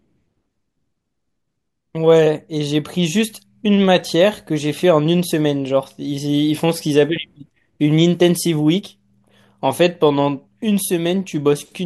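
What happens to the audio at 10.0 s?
Nothing goes wrong at 10.0 s; the speech carries on without interruption or any audible technical fault at that point.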